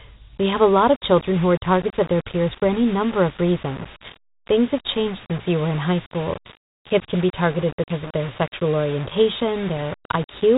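Dialogic VOX ADPCM runs through the whole clip. The speech was stored as 4-bit adaptive differential samples at about 32 kbps, which fits 8,000 samples a second. Nothing remains above 3.8 kHz, so the sound is narrow and dull, and a plainly audible gritty hiss follows each syllable.

Low bit depth without dither starts at 0.37 s and lasts to the end. The signal was likely rounded to about 5 bits with no dither, leaving error only around 15 dB below the speech. That error tracks the sound, giving grainy distortion that thickens on quieter passages.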